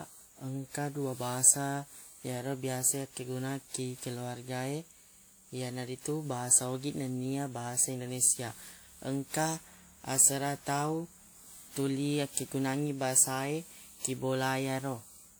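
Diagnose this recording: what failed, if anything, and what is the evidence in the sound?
The codec stage most likely failed through generation loss: the speech sounds re-encoded around seven times, which fits a WMA 1 chain near 96 kbit/s. Each pass requantises on a shifted frame grid, so swirly noise and hollow spectral gaps accumulate throughout, and consonant attacks smear, while content still reaches 20.1 kHz.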